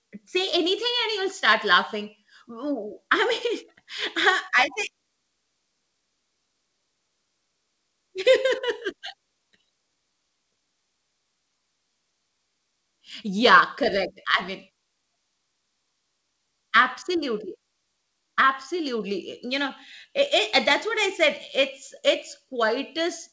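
Nothing goes wrong anywhere in this speech, which has come through a call connection whose codec leaves nothing above 8 kHz.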